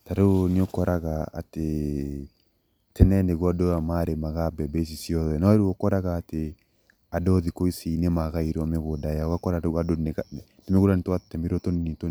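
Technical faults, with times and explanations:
No technical faults can be heard anywhere in the speech; the signal has no interruptions or damage.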